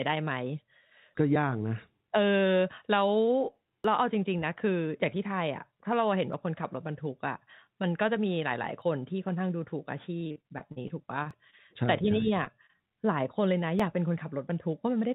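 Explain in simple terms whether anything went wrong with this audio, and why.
Several things went wrong, each heard as a different kind of disturbance in the speech.

Tiny skips land at 1.36, 3.84, 6.33, 8.82, 11.31 and 13.80 seconds, almost exactly every two and a half seconds. This is most likely audio missing between chunks: a recorder saving in blocks drops about a hundredth of a second at each join. The steady spacing sets it apart from network dropouts, which come at random.

From 10.17 to 11.55 seconds the speech turns choppy and machine-like. This is repeated packet loss (robotic sound): twelve pieces of the call never arrived, the longest 40 milliseconds, and each hole was patched by stretching out the last sound.

Two brief smears at 12.45 and 12.66 seconds are short concealed packet loss. Each is a single patched hole of about 20 milliseconds, so it sounds like a quick wobble rather than a run of robotic sound.

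From 14.50 to 15.04 seconds the speech hurries slightly, about 6 percent faster, while the pitch stays the same. This is a jitter buffer speed-up. The receiver trimmed away a few hundredths of a second in tiny slices to catch up on delay.

All of this passed through a telephone-style call path, which carries no sound above 4 kHz.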